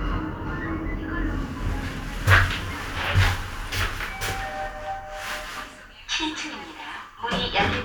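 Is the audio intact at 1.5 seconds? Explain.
Yes, the audio is intact at 1.5 seconds, with no dropout, click, distortion or other fault at that moment.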